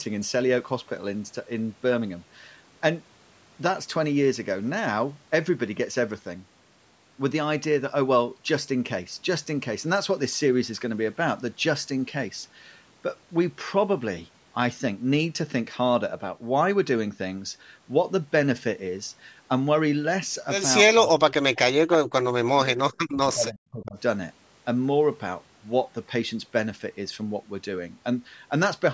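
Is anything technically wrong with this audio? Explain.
Yes. Speech suppressed in double talk, from 20.93 to 22.25 s and from 22.56 to 23.97 s: the echo canceller likely mistook overlapping speech for loudspeaker echo, so the speech drops by roughly 40 dB. The call's microphone processing keeps the audio below 8 kHz.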